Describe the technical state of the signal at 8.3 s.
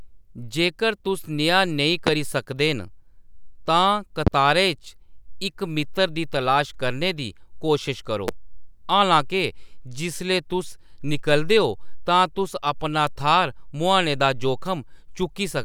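A single loud pop from 8.28 to 8.31 s, likely a voltage pulse from a plug, switch or static, hits far above the speech, which continues underneath rather than dropping out.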